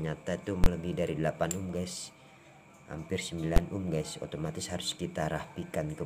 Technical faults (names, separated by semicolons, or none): invalid numbers at full scale